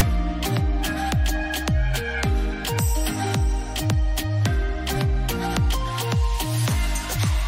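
A short, harsh rasp at 0.0 s, lasting only about 8 ms, cracks in at the very start with hard edges on both sides, like a burst of static pushed off to one side of centre rather than centred on zero. This is file tags played as audio: a block of text tag data at the head of the file is being decoded as if it were samples, so the character bytes come out as loud, lopsided noise before the real sound begins.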